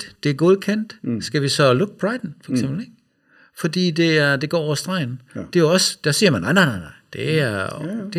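Channel delay (comb filtering) runs throughout: one channel lags by under a millisecond, so the mono sum cuts evenly spaced notches from around 700 Hz, leaving the speech hollow.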